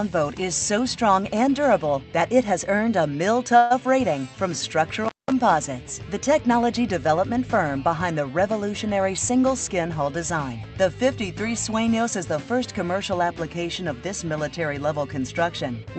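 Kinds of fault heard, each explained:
Call audio freeze: Packets were held up in transit and the jitter buffer ran dry, so the receiver likely kept the last sound going as a fading buzz or hiss rather than going quiet. About 130 ms was filled this way around 3.57 to 3.72 s, with no silence reached. When the packets arrived the audio resumed where it stopped, so nothing is lost, but everything afterwards sits about 130 ms later.
Intermittent contact: A loose cable or plug opened briefly, interrupting the signal path. From about 5.05 to 5.32 s the sound drops out or breaks up, with crackle at the edges of the break, and the line stays open for roughly 196 ms. During that open stretch what remains is faint hiss, possibly with mains buzz, in place of the audio.
Jitter buffer speed-up: The jitter buffer was holding more audio than its target, so the receiver trimmed short pieces of one or a few pitch periods again and again to bring the delay back down. 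From about 9.0 to 10.57 s this removes roughly 150 ms in total, making that passage run at about 107% speed with pitch unchanged, so it sounds hurried.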